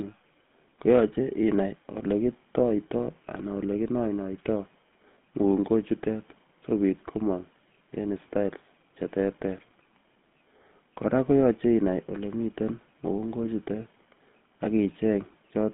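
From start to finish the speech has gone through the GSM full-rate codec, and you can plainly hear it. The codec rebuilds the voice from a vocal-tract model fed by a sparse, regularly spaced pulse train, so everything picks up a buzzy, gravelly grain. The line band sits at roughly 150 Hz to 3.5 kHz, with nothing above 3.8 kHz, which gives that boxed-in phone sound. The roughness fits a 13 kbps stream.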